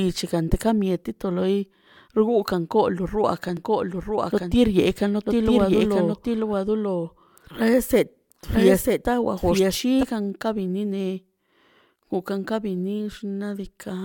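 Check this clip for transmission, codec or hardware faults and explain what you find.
One fault is present: a doubled audio track from 3.57 s to 10.03 s. A second full-band copy of the speech runs roughly a second behind, about 5 dB quieter, likely from a slower capture path feeding the same signal twice. It cuts in and out abruptly, with no reverb tail. On a spectrogram, each syllable's pattern repeats a second later. The waveform shows overlapping envelopes that start and stop sharply.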